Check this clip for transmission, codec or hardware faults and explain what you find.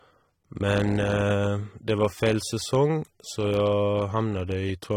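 One codec fault runs through the whole speech clip. It is AAC compression, likely at a low bitrate near 32 kbps. Coarse spectral quantisation leaves plainly audible smearing and fizz, with nothing above 19.3 kHz.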